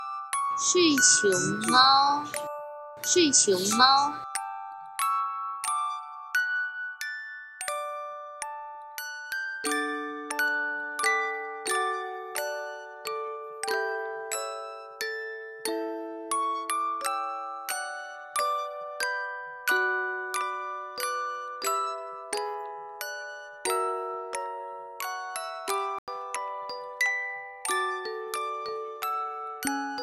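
At 25.99 s the sound drops abruptly into dead silence, lasting to 26.08 s, a gap of about 94 ms that fits a run of several compressed frames. This is a corrupt frame muted: bits in the encoded data were flipped, the decoder rejected those frames, and the player substituted silence for them. Because the missing frames were filled rather than skipped, timing holds and the audio resumes in place.

At 28.69 s there is a brief error, peaking at about -31 dBFS. This is a corrupt FLAC frame. Flipped bits reached the decoder, which did not act on the checksum. The predictor then rebuilt samples from wrong values until the damaged data ran out, a span that points to two frames being affected. The error is short and fairly quiet, and the following intact frame decodes cleanly.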